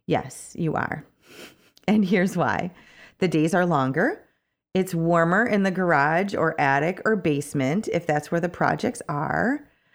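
No technical faults are audible.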